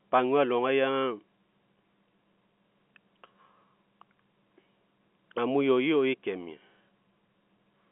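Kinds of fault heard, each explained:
Nothing to list here, really: the speech sits in the narrow telephone band with nothing above about 3.8 kHz, just what you'd expect from a G.711 A-law line at 64 kbps, and no fault shows up anywhere in it.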